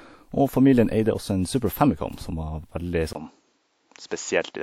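At 3.13 s there's a gap of about 20 ms, then the speech comes back with nothing above 7.6 kHz and a new noise floor roughly 45 dB down, at much the same level. That's likely the input switching to a poorer device.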